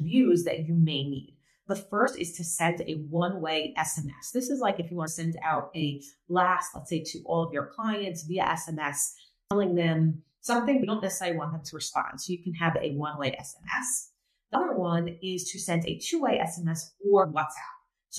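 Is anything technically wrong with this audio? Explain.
Yes. Compressed frames are skipped at 2.07, 5.06, 9.50, 10.82, 14.54 and 17.23 s. Each time, whole frames never play, so the sound jumps ahead by roughly 50 to 150 ms, which fits multiples of a 23.2 ms frame. Nothing falls silent at the joins.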